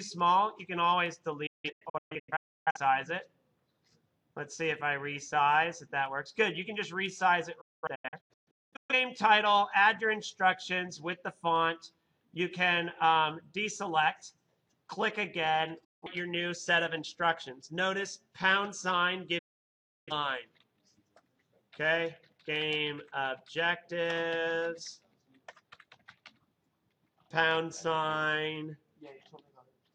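Sound cuts out behind quick 8 ms fades in broken clusters of short holes at 1.46 to 2.80 s and 7.61 to 8.94 s, then in shorter gaps at 15.84 to 16.08 s and 19.38 to 20.12 s. This is digital broadcast dropout: the receiver lost frames and muted until good ones returned, so that audio is gone.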